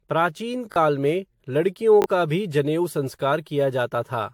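The whole speech clip has a swirly, hollow, smeared quality, with consonant attacks blurred and nothing above about 19.2 kHz. That's generation loss, likely from being run through AAC-LC about seven times, each pass adding fresh quantisation noise and spectral holes.

At 0.72 s, just before "में लड़कियों का भी", there's a tiny stutter: a repeated buffer, where a short chunk played twice more with hard joins. That fits a 20 ms buffer, with about 40 ms of real audio lost. The same happens at 2.02 s, between "में लड़कियों" and "का भी जनेऊ".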